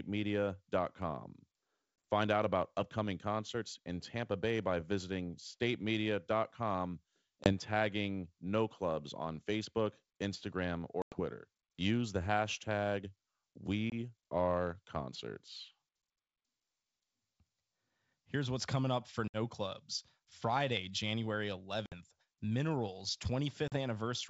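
Speech over a G.722 wideband call suffers packet loss on an ADPCM call at 2.03, 7.44, 11.02 (100 ms), 13.90, 19.28 after "what's coming up for", 21.86 and 23.68 s. The holes are hard-edged silences of 20 to 100 ms, not smoothed-over concealment. Each returns slightly distorted while the predictor resynchronises.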